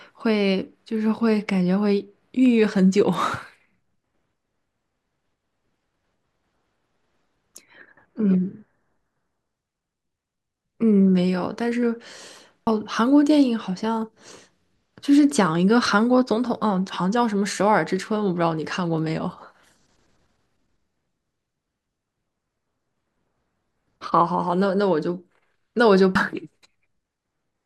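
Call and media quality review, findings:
Damaged data in a compressed stream, at 12.67 s and 26.15 s: corrupted bytes in the encoded speech stream make the decoder misread frames, lose sync and hunt for the next frame header. Each point is heard as a brief chirp or blip.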